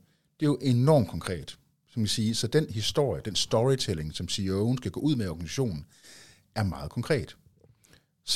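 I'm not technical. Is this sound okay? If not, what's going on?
Yes, nothing in this recording stood out as a problem when I listened to it.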